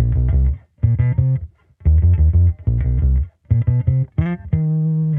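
Nothing in the clip points to a technical fault at any point.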